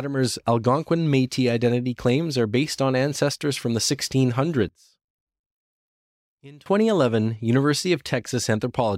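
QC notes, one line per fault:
4.69–6.66 s, one channel inverted: speech nearly vanishes, dropping about 24 dB on mono sum, likely from reversed polarity cancelling the shared centre content.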